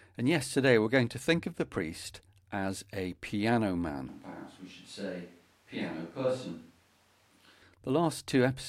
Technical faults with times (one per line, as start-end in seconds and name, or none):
4.08-7.62 switch to a distant microphone